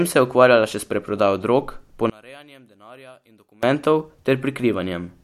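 One channel inverted, from 2.10 to 3.63 s, right after "še s preprodajo drog": the speech suddenly drops by about 28 dB, background included, leaving only a residue of the sound until normal level returns at 3.63 s. The likely cause is reversed polarity on one side of a stereo pair, so when the two channels were summed to mono, everything they shared cancelled. Only the small difference between the channels survived.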